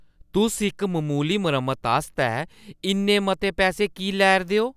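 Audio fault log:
No faults heard anywhere in the speech.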